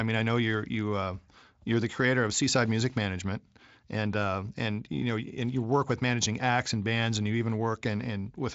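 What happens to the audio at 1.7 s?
Nothing goes wrong at 1.7 s: the speech carries on intact through that moment, with no audible fault.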